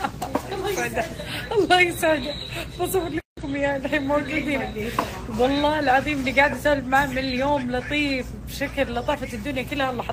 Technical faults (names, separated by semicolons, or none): none